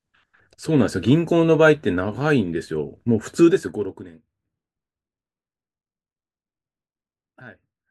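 From about 3.44 to 4.24 s there's zipper noise: the level drops by roughly 20 dB in 1 dB jumps, around 30 a second, with no smoothing between them. Each jump leaves a tiny click, so you hear a ticking zip riding on the speech as it fades.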